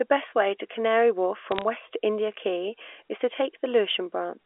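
A short burst of sharp ticks and crackle sits on top of the speech from about 1.52 to 1.62 s, while the speech beneath it is unchanged. These are bit errors on a digital phone line: a small fraction of bits, around one in five hundred, were flipped in the G.711 telephone coding, which keeps its usual narrow 300 Hz to 3.5 kHz band here. Each flipped bit corrupts a single sample, and hits on the sign or high-order bits jump the waveform abruptly, producing the clicks.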